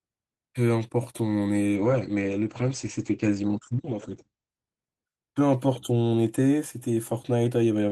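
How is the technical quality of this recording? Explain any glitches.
The speech turns rough and muffled from 1.76 to 4.57 s, losing its top end above 8 kHz, for a stretch of about 2.75 s. This is a call bitrate drop: the encoder coded the audio more coarsely, consistent with a fall from roughly 32 to 12 kbps, before recovering.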